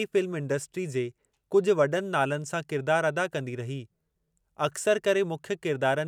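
No technical faults are audible.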